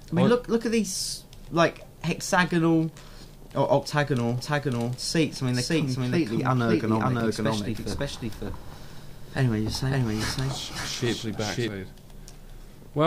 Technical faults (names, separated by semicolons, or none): doubled audio track; CD scratch ticks